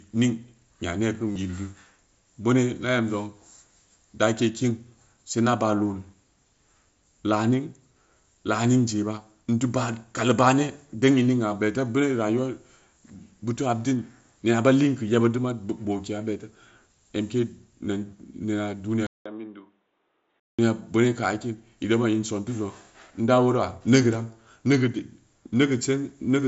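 A speech recording: at 1.33 to 1.36 s a brief buzzy, held tone replaces about 30 ms of sound before a slight warble as it resumes, from concealed Bluetooth headset packet loss, where the receiver repeats recent waveform to cover the gap. From 19.07 to 20.59 s a 190 ms silence gives way to duller, noticeably quieter audio with nothing above 3.8 kHz and a faint new noise floor, likely from the input being switched to a poorer device with a narrower band, beneath the light graininess of the mSBC headset codec.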